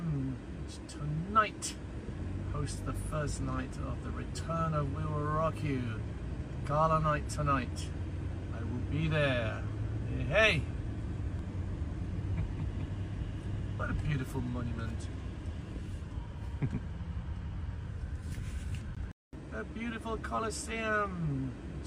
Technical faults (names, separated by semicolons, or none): dropped buffer (overrun)